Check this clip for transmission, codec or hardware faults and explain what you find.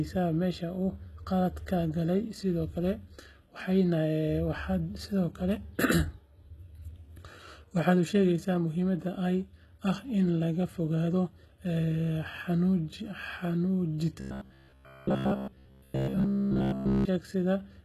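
Two faults are present: codec damage across the whole speech clip, and a robotic stretch near the end.

Throughout, the sound shows plainly audible damage most likely from HE-AAC compression, which fits a low bitrate around 16 kbps. Only the lower spectrum is coded directly. The treble is synthesised by copying lower bands upward and shaping them with a coarse envelope. The rebuilt top end stays bright but its harmonics don't align with those below, so sibilants come out gritty and metallic.

From 14.20 to 17.05 s the sound turns robotic from repeated short buffers, likely because fresh audio arrived too seldom and playback filled the gaps by looping the last fragment. Most of the audio in that stretch is repeats rather than new material. The loop imposes a fixed buzz at 66.7 Hz, which points to a buffer of about 15 ms, giving a rigid, metallic drone that only loosely tracks the speech.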